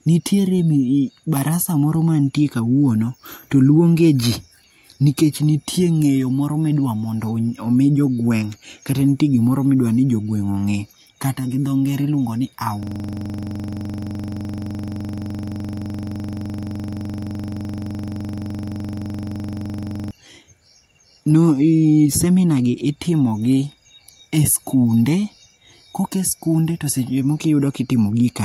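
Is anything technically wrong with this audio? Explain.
Yes. A system hang loop runs from 12.83 s to 20.11 s, just after "dho ngere iluongo ni". Playback froze while the hardware kept replaying one 42.7 ms slice, which fits a 2048-sample buffer. It repeats about 170 times at 23.4 Hz, giving a rough, rapid buzzing stutter.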